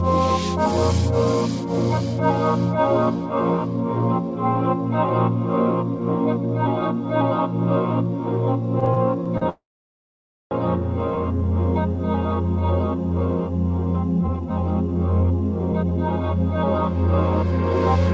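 Packets reaching the receiver late or too slowly kept draining the jitter buffer between 8.80 and 9.44 s, producing repeated stalls (stutter). The receiver bridged five short gaps, the longest 38 ms and about 96 ms in all, by extending the last sound. Nothing is lost, but roughly 15% of that stretch is filler, so the audio catches and drags in small hitches. Right after, from 9.49 to 10.54 s, comes a call audio freeze, likely from packets held up in the network until the buffer ran dry. The last sound is stretched briefly and then gives way to about 0.9 s of silence. The audio then resumes where it stopped, so about 1.0 s of gap has been inserted with nothing missing, and playback now runs about a second later than before. Between 14.21 and 16.21 s the buffer, holding more audio than its target, performs a jitter buffer speed-up. It trims pitch-period-sized slices again and again, removing around 0.4 s in total. 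The audio plays at 121% speed with its pitch unchanged and sounds rushed. Throughout, there is no content above 8 kHz, which fits the G.722 call path at 64 kbps carrying the audio.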